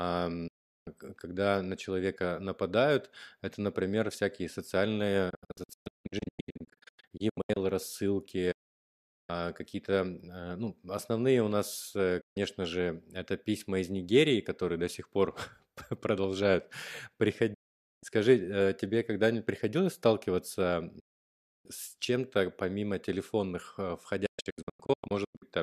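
The speech mutes through quick fades of about 8 ms at 0.47 to 0.87 s, just before "когда на человека нападают". It then breaks into scattered short holes across 5.30 to 7.57 s, and goes silent again at 8.51 to 9.30 s and at 12.21 to 12.37 s, between "ну основные у нас" and "же это письма из". Further gaps follow at 17.54 to 18.03 s and 20.99 to 21.66 s, and broken holes run across 24.26 to 25.43 s after "помимо телефонных э". This is digital broadcast dropout: the receiver lost or rejected frames and muted until clean ones returned, so that audio is gone.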